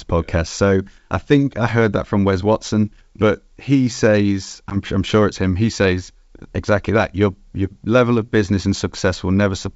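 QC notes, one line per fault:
4.70–4.77 s, packet loss on an ADPCM call: after "but he says", one lost packet leaves a 10 ms silent hole, a hard-edged blank stripe on waveform and spectrogram. The decoder's predictor and step size then mismatch, so "I'm sure it's him" returns slightly distorted.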